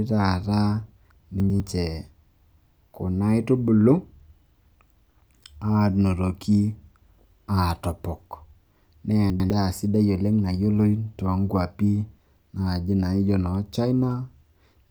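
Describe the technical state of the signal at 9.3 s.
Chunks out of order from 9.3 to 9.5 s: one 100 ms chunk plays a chunk late, jumbling the sound, with three hard joins showing as vertical spectrogram lines and waveform steps.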